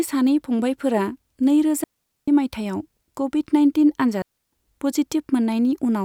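A speech recording with two digital wireless dropouts: clean near-silent holes from 1.84 to 2.28 s (about 440 ms) and from 4.22 to 4.52 s (about 300 ms). The receiver lost too much data and muted behind a very short fade, with no noise burst either side.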